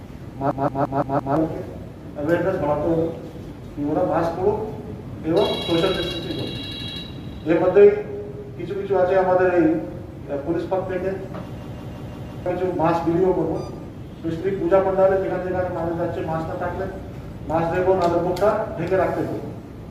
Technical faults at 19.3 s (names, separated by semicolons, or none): none